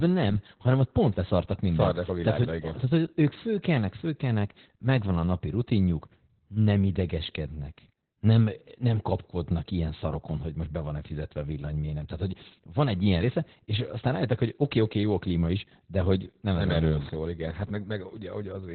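Throughout, the speech sounds muffled, hoarse and slightly robotic, with nothing above 4.3 kHz: heavy Opus voice compression, pointing to narrowband SILK coding at about 8 kbps.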